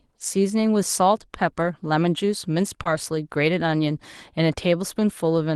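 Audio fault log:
1.59–1.73 s and 2.85–2.87 s, lost packet rebuilt from error correction: about 80 ms, then 20 ms, play without a gap but sound rougher and noisier. Each following packet carried a low-bitrate Opus copy of the lost one, and the decoder played that copy. The first stretch fits four lost 20 ms frames.
2.83–2.87 s, short concealed packet loss: a brief smear lasting about 20 ms. That audio never arrived in time, so the receiver extended the preceding sound from its pitch or as shaped noise, then blended back into the real signal.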